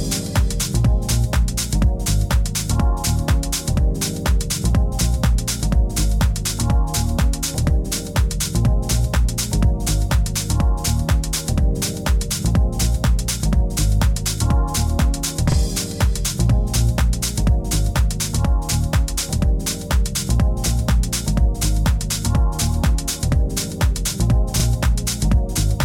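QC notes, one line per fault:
15.52–15.56 s, repeated buffer: fresh audio failed to reach the output in time, so the device replayed its previous block once. A 40 ms slice of sound is heard twice with a hard join, making a brief stutter. Nothing seems lost, just delayed.
24.60–24.64 s, repeated buffer: the same underrun recurs. The last 40 ms block, which fits a 40 ms buffer, plays one extra time, giving another short stutter with an abrupt seam where the repeat starts and the audio resumes.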